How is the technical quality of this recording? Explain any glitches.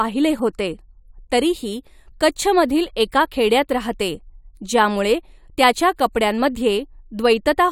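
No technical faults can be heard anywhere in the recording, so there are no glitches to explain.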